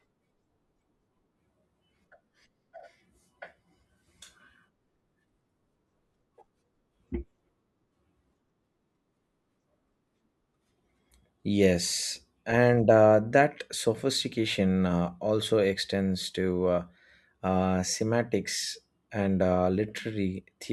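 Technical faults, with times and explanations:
No technical fault can be heard anywhere in the speech recording.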